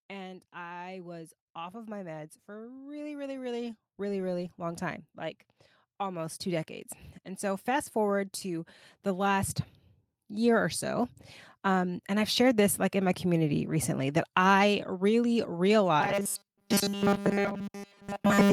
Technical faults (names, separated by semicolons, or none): automatic gain rising; robotic sound from repeated short buffers